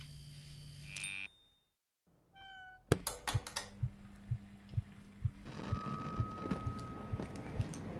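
No technical faults can be heard anywhere in this recording.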